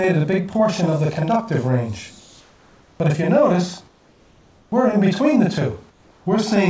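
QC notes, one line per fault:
Throughout: channel delay (doubling). A second copy of the sound arrives 40 ms after the first, at the same level. One channel ran late by a buffer of that length before both were summed to mono, so everything sounds doubled.
2.20–3.00 s, 3.88–4.72 s and 5.90–6.26 s: comfort noise in place of the background. In each pause the real background turns into a smoother, different noise, about 2 to 4 dB quieter. Likely cause: discontinuous transmission, with the receiver filling pauses with synthetic noise.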